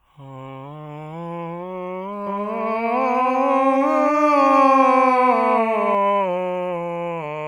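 A music clip in which, from 2.27 s to 5.95 s, a doubled audio track appears: a second full-band copy of the music trails the original by about 300 ms at roughly the same level, with no decay or room colour, and it cuts in and out abruptly at those points. The likely cause is a second, slower capture path or an edit holding two copies out of step. On a waveform and spectrogram, every onset repeats 0.3 s later with equal energy.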